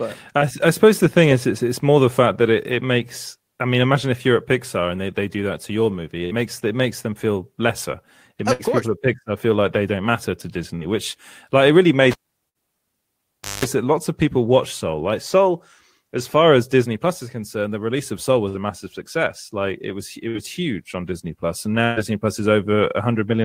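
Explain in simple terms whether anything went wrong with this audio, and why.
Bursts of packet loss at 6.25, 8.53, 10.75, 12.49, 18.49 and 21.84 s dropped parts of the speech. The receiver stretched the last sound to fill each gap, and then the audio jumped ahead, with about 60 ms missing each time and 120 ms at 21.84 s.

The cable was pulled and plugged in from 12.11 to 13.65 s. There's a pop, then about 1.5 s of near silence, a short 50 Hz mains buzz, and another pop as the speech returns.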